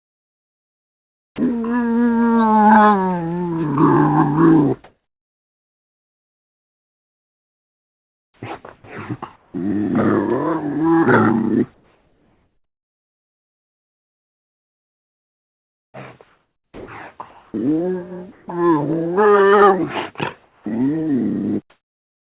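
Comfort noise in place of the background runs from 0 to 1.38 s. The real background, sitting about 47 dB below the loudest passages, gives way to a smooth, even hiss about 11 dB quieter. This is likely discontinuous transmission, where the sender stops sending during apparent silence and the receiver synthesises a rough stand-in for the background. The same flat, detail-free fill returns from 4.84 to 9.54 s, covering nearly 4 s of that stretch. It appears briefly again at 20.44 to 20.66 s, about 7 dB down. From 21.7 s to the end it is almost level-matched, only about 1 dB quieter. The band stops at 4 kHz throughout, as the call path's narrowband codec would produce.

Onset clipped by the voice detector occurs at 1.31 to 1.38 s, where 70 ms of the returning sound is missing. The sound jumps straight in with no soft attack, likely because the detector was slow to register activity and those first moments were filled with synthetic noise instead. 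Shorter bites of about 20 ms occur at 8.82 s and 20.64 s. Each gives a slightly abrupt, clipped start rather than a natural rise.

Sound chopped by the voice detector spans 11.74 to 18.48 s. Over this stretch the sender likely toggled repeatedly between transmitting and going silent, and about 5.2 s in total was replaced by fill. The result is a choppy, gated texture. Quieter portions and edges drop out.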